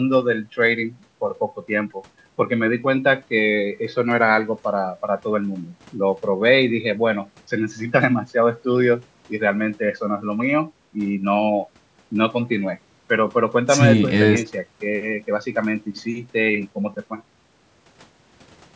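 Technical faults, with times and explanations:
No technical faults are audible.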